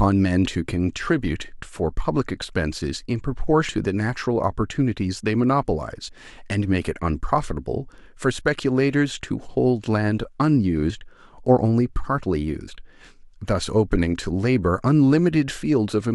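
At 3.68 s the speech jumps forward. Compressed frames were skipped there. They were missing or rejected by the decoder as damaged. About a fifth of a second of audio is gone, which points to roughly ten frames. Shorter skips follow at 6.07 to 6.09 s, 10.89 to 10.91 s and 12.67 to 12.69 s. Each loses about 50 ms, likely two frames.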